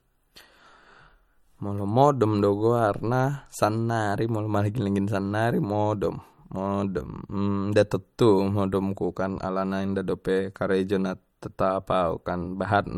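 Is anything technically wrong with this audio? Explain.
Yes, one issue. Throughout, it's low-bitrate audio saved at a high bitrate: the speech keeps low-bitrate MP3 coding artefacts and has nothing above 18.7 kHz. That fits a likely chain of a 48 kbit/s MP3 re-saved at around 200 kbit/s, which can't restore what the first encode discarded.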